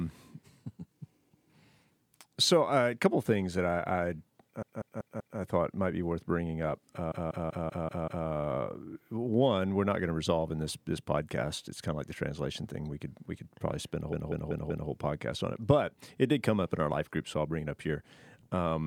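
Speech with repeated frames in three places: a 192 ms block plays four extra times from 4.62 to 5.39 s just before "I thought might be", six extra times from 7.12 to 8.27 s after "be worth bringing up", and four extra times from 14.13 to 14.90 s between "could probably spend a" and "podcast on it but". A stretch of compressed frames was duplicated, probably six frames, so the decoder replays it, stretching the clip by 0.77 s, 1.15 s and 0.77 s. It is heard as a rapid stutter. On a spectrogram and waveform, identical slices tile side by side every 192 ms.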